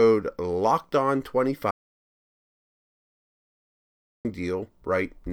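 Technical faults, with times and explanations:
1.71 to 4.25 s, audio dropout to silence: the speech cuts off mid-flow and the signal falls to silence for about 2.54 s, with no room tone, before returning abruptly. The input was likely lost while recording continued writing silence, so that stretch of speech is gone.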